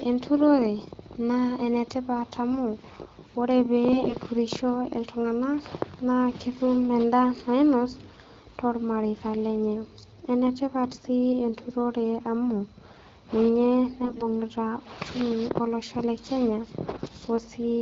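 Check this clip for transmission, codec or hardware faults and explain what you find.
The speech has three short bursts of AMR bit errors, at 3.92 to 4.15 s, 10.91 to 11.07 s and 14.02 to 14.25 s, heard over clean HD Voice style wideband coding. A weak link flipped the less protected bits at roughly a 7% bit error rate, misplacing excitation pulses and skewing pitch, gain and spectral detail. The voice keeps its rough pitch and level but turns hoarse, scratchy and gargly.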